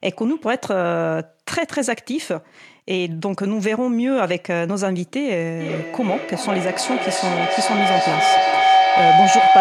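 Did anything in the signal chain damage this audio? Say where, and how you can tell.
Yes: feedback howl in the call, from 5.6 s. A tone near 700 Hz builds on a loop that repeats every 0.4 s, peaking about 8 dB over speech. The loop gains each trip.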